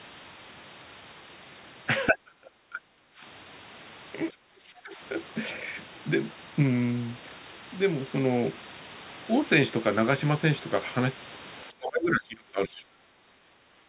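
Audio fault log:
2.09–3.23 s, 4.31–5.0 s and 11.7 s to the end: speech suppressed in double talk. The talker's level dips hard, by around 35 dB in the first stretch, about 15 dB in the second and about 20 dB in the last. The likely cause is an echo canceller mistaking overlapping far-end speech for echo. The waveform envelope collapses in those spans, and the spectrogram shows the energy below the 4 kHz ceiling of the G.711 path fading toward the room-noise floor.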